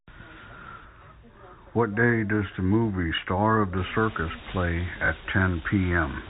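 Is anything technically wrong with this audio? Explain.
Yes. Packet loss with last packet repeated occurs at 3.16 to 3.18 s and again at 5.06 to 5.08 s. Each gap of 20 ms, which fits a single lost packet, was filled by replaying the preceding packet. That repeat rarely aligns with the pitch cycle, and each one sounds like a small blip.

An unreliable data bit runs from 3.77 s to the end. One marginal data line flips its bit in a random share of samples, adding equal-sized spikes. The result is a constant crackle or fizz that continues through the pauses as well, layered over the narrowband telephone sound of the G.711 A-law coding.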